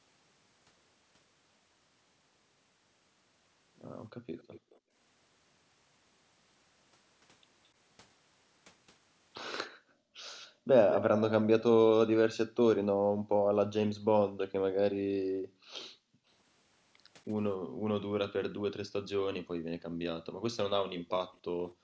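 From 4.17 to 4.94 s the echo canceller clamped the microphone while the far end was playing, so background gated by the echo canceller dips the room sound by about 32 dB for roughly 0.4 s. Within that, from 4.38 to 4.79 s, a faint copy of the speech returns 216 ms late, most likely an echo leak where the canceller failed to remove all loudspeaker pickup.

The same leak is stronger from 9.63 to 11.63 s: the 216 ms delayed copy sits only modestly below the direct speech, audible as a double. Over much of it, from 9.71 to 10.68 s, the canceller's gating cuts the background by about 40 dB.

From 12.95 to 17.92 s the suppression returns intermittently, dropping the room tone by up to about 40 dB for around two seconds in total. A brief, very faint echo at a longer 284 ms delay appears at 15.78 to 15.9 s.

From 19.89 s to the end, gating again pulls the background down by about 40 dB. A 284 ms echo of the speech sits well below the direct sound from 20.96 to 21.71 s. 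The call's normal band limit leaves nothing above 8 kHz.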